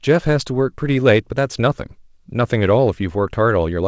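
Nothing's wrong with this bit of speech, which just sounds like it came over an ordinary wideband call, with the top end stopping around 8 kHz as you'd expect from that kind of line.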